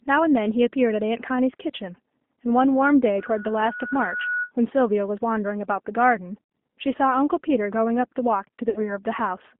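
Throughout, the speech carries G.729 codec damage at 8 kbit/s: the line is confined to roughly 200 Hz to 3.6 kHz, so nothing bright survives, and the voice sounds rough and faintly synthetic. The decoder rebuilds each frame from a vocal tract filter, a pitch predictor and a few pulses rather than the waveform itself. That coarse pulse excitation gives a grainy, buzzy texture, which sets it apart from the muffled, smeared sound of a plain low-pass filter.

From 3.18 s to 4.52 s a loudspeaker feedback squeal rises. The microphone is picking up its own loudspeaker, and at 1.5 kHz the loop gain has passed one, so that frequency feeds on itself. It swells over about a second to sit only a little below the speech. What marks it as feedback rather than an interfering tone or hum is the growth: a single steady pitch that builds on its own.

At 6.44 s, and again from 8.70 s to 8.99 s, VoIP packet loss concealed by the speech codec appears. 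Each time about 60 ms of audio is missing, which fits two 30 ms packets. The decoder stretches its last pitch and filter into a fading buzzy tone or coloured noise instead of leaving a silent gap or a click. In the second event the voice stays weak and distorted for about 230 ms after the packets return, because each rebuilt frame depends on the one before it.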